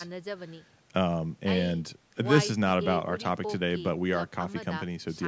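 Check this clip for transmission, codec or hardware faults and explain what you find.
Nothing stood out on listening to this speech, which shows only the expected call microphone processing with its trimmed lowest bass and no content above about 8 kHz.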